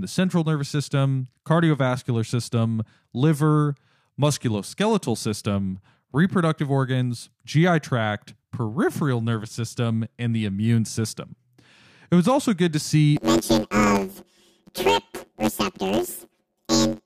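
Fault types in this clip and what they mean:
Planar audio read as interleaved: after "also good to see", 10.88 ms blocks play twice at double speed, making a 92 Hz buzz with spectrogram harmonic lines.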